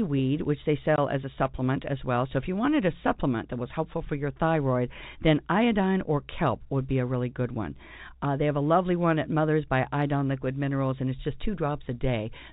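At 0.96 to 0.98 s, between "which they" and "as a supplement as", packet loss filled with silence cuts a 20 ms hole, which fits one lost packet. Unlike concealment that smears or repeats sound, this gap is true silence with hard edges. The G.711 telephone coding band limit stays below 4 kHz.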